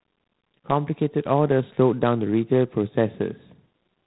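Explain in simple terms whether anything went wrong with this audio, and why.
Yes, the whole clip has G.726 ADPCM damage: a harsh, rasping hiss that rises and falls with the speech, unlike steady background noise, and nothing above 3.9 kHz.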